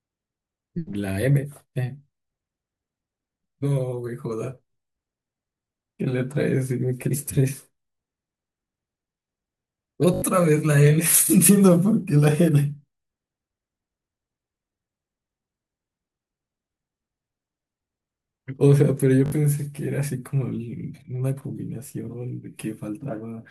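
Brief buzzing stutters at 10.14 s and 19.26 s, where a short slice of speech loops several times, are repeated buffers: audio arrived late, so a piece fitting a 20 ms buffer replayed.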